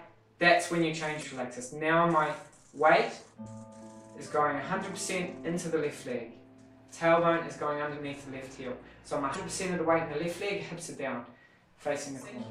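Short glitches break through the sound four times: from 1.19 to 1.24 s, once at 5.58 s, from 9.32 to 9.36 s, and from 12.20 to 12.23 s, each lasting under 50 milliseconds. These are damaged data in a compressed stream. Bytes in the encoded file were corrupted, so the decoder misread those frames, lost sync and hunted for the next valid frame header, producing a brief glitch instead of clean audio.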